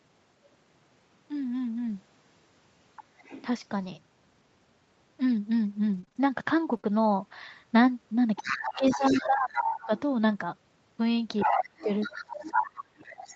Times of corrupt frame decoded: none

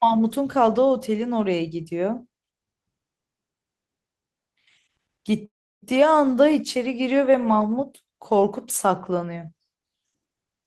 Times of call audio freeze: 5.45-5.84

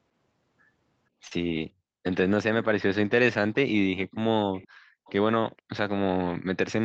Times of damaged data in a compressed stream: none

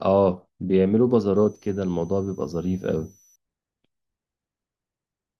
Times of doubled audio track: none

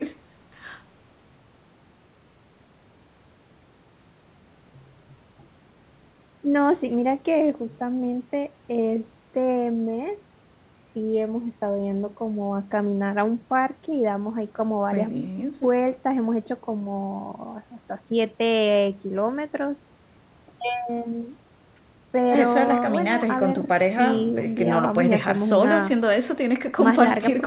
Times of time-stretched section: none

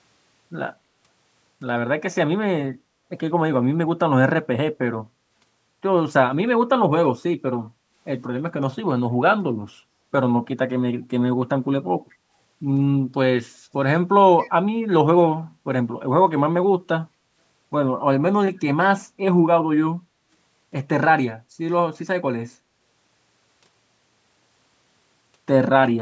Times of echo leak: 14.39-14.50

